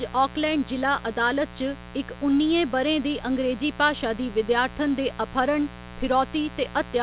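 Right from the start and for the whole clip there's a mains buzz sitting under the speech, roughly 15 dB below the talker. It's built on 60 Hz, with spiky interference getting in twice per mains cycle, so you get a stack of harmonics that gives it that raspy, steady edge rather than a clean hum. It all sits inside the call-style band, with nothing above 4 kHz, which points to a narrowband codec like G.711.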